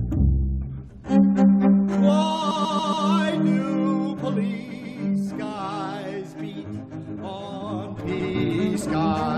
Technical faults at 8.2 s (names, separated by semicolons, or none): zipper noise; repeated frames